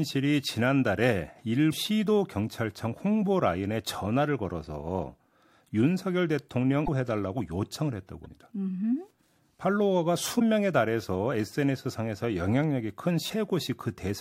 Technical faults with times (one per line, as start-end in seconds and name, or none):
1.69-1.74 damaged data in a compressed stream
6.83-6.89 damaged data in a compressed stream
8.22-8.27 damaged data in a compressed stream
10.36-10.41 damaged data in a compressed stream
13.26-13.30 damaged data in a compressed stream